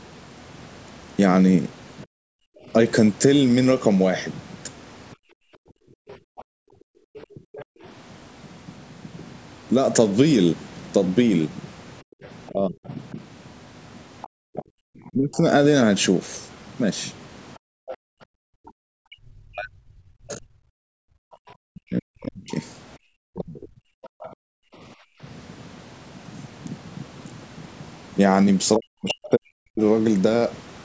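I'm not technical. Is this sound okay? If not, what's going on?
No. Three related problems come from the call's echo control.

Speech suppressed in double talk happens at 2.05–2.45 s, 5.49–7.4 s, 12.05–15.44 s, 18.76–24.15 s and 28.77–29.81 s. The speaker's sound dips sharply, in places almost to silence, and it is worst in the 18.76–24.15 s stretch, where about four seconds are lost in pieces. This is likely because both sides talked at once. The echo canceller, which tries to remove the loudspeaker's sound from the microphone, couldn't tell the two apart and turned everything down.

Background gated by the echo canceller shows up at 5.16–7.82 s and 17.58–25.21 s. The room sound drops away almost completely for short spells, about one and a half seconds in total in the first stretch and about two seconds in the second, then comes back. While the loudspeaker was playing, the echo canceller clamped the microphone down hard, and it released the microphone once the loudspeaker went quiet.

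The other side's voice leaking through is heard faintly at 6.11–7.65 s, 12.25–17.97 s, 24.03–24.29 s and around 29.1 s. It is quiet but audible under the main sound, and clearest in the long 12.25–17.97 s stretch. Here the likely cause is the opposite failure. The echo canceller didn't remove everything the loudspeaker played, so some of the far side reached the microphone and was sent back.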